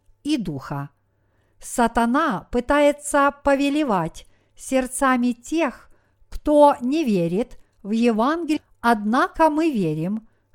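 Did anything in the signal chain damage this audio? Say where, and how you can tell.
Yes. At 8.56 to 8.61 s the speech jumps abruptly forward, with a short blip at the join and no fade or gap, so the sound on either side does not run on naturally. This points to the network and playback stage. A stream segment skipped is the likely cause: one chunk of the segmented stream failed to arrive or load, and the player moved straight to the next segment, dropping that stretch of programme and splicing the two edges together.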